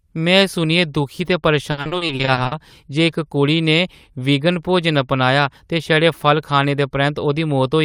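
From about 1.71 to 2.53 s there's a burst of repeated packet loss, and you get that robotic sound. Something like a dozen short holes land back to back, the longest around 60 ms, and each one gets papered over by stretching the sound that came just before it. Nearly half that stretch ends up being concealment rather than real audio, so the speech goes choppy, with bits missing.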